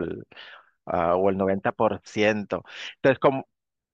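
No technical faults are audible.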